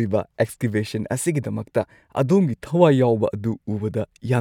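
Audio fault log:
No audible faults detected.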